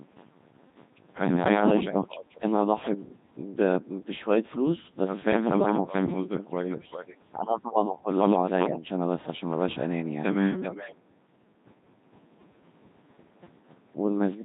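From start to finish the speech has been through a Codec 2 vocoder, with heavy damage, and the thin, synthetic quality fits a rate of about 2.4 kbit/s. The decoder does not keep the original waveform. It rebuilds the voice from sine waves, driven by pitch, voicing, energy and a coarse spectral envelope. The result sounds robotic and buzzy, with a flat, mechanical timbre.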